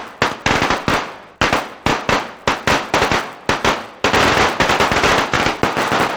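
From start to finish the sound carries a steady buzz at 100 Hz, the mark of a resampler restarted on every block. Each short block was converted on its own, which fits 10 ms blocks taken from 16 kHz up to 48 kHz, so every block edge carries a small error. Unlike mains hum, this buzz rides only on the signal and drops away in quiet gaps, and its rate never wavers.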